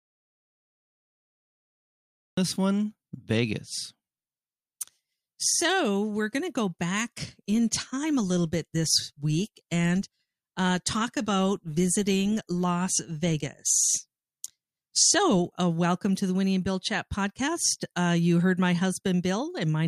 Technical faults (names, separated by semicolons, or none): audio dropout to silence